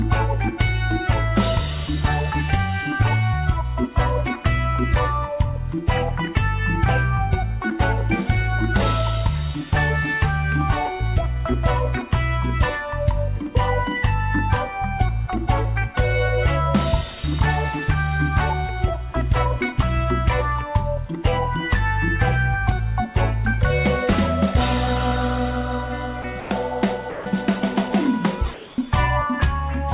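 Around 26.22 s, 26.4 to 26.5 s and 27.1 to 27.26 s, the sound briefly drops out and steady, featureless noise sits in its place for 20 ms, 100 ms and 160 ms. That's the pattern of sound dropped by the voice detector. The sender's detector likely mistook quiet passages for background and stopped sending, and the receiver filled the gaps with comfort noise until the detector triggered again.

At 28.54 to 28.78 s there's comfort noise in place of the background. For 240 ms the real background, sitting about 22 dB below the loud parts, is swapped for smooth synthetic noise, most likely because the sender went into discontinuous transmission during the pause. The level barely shifts, by about 1 dB, so what gives it away is the loss of texture rather than loudness, heard against a band that already stops at 4 kHz from the G.711 call path.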